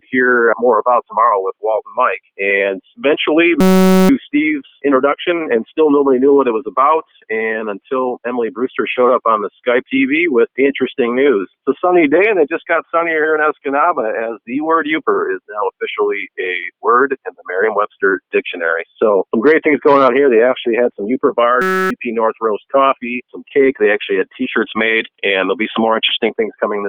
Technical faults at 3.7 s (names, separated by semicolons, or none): system hang loop